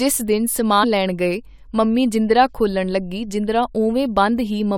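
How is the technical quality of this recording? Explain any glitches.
There is one glitch in the speech. From 0.825 to 0.845 s there is damaged data in the compressed stream: corrupted bytes make the decoder misread frames and lose sync until it finds the next header. This produces a short glitch heard as a chirp, squawk, click or brief hole, seen as a brief broadband smear on a spectrogram and a jagged discontinuity in the waveform.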